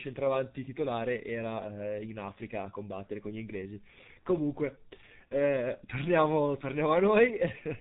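Throughout the speech, a G.723.1 codec has imposed heavy damage. Its slow 30 ms frame updates and sparse coding, consistent with the 6.3 kbit/s mode, leave the voice hoarse with smeared consonants, and nothing passes above 3.8 kHz, so the sound is muffled.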